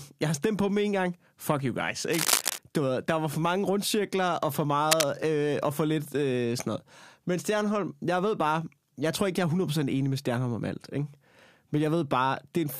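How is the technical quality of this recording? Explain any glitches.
The recording has two bursts of cable scratch noise. They run from 2.11 to 2.58 s and from 4.85 to 5.07 s, between "mange rundcirkler og for" and "øh og for lidt". Both are ragged rustling about as loud as the speech, likely from a worn connector being moved. On a spectrogram they show as dense broadband smears, and on the waveform as spiky, irregular clusters.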